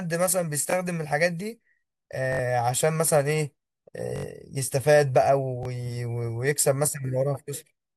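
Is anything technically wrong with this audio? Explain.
Yes, the speech has five repeated buffer stutters. At 0.70, 5.63 and 6.91 s a roughly 21 ms slice plays twice, which fits a 1024-sample buffer. At 2.33 to 2.39 s it repeats three extra times, and at 4.16 to 4.25 s four. New audio didn't arrive in time, so the device looped its last buffer. Each repeat butts up with a hard join, giving a short stutter, and around 20 to 100 ms of real speech goes missing.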